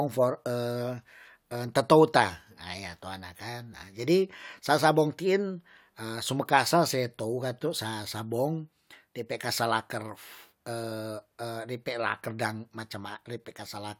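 A short speech recording, and there's nothing technically wrong with it that a listener would pick up on.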